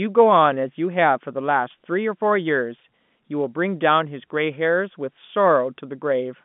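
Telephone-band speech with no technical faults to report.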